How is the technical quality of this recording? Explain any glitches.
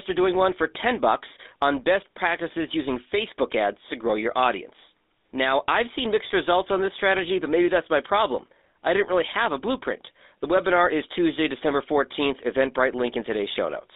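The recording has been through a narrowband phone codec, and the damage is plainly audible. Throughout the speech there is GSM full-rate codec coding: the sound is confined to about 250 Hz to 3.7 kHz, and the codec rebuilds the voice from a vocal-tract model driven by sparse, evenly spaced pulses, which fits a rate of around 13 kbps. The result is a buzzy, gravelly roughness on the voice.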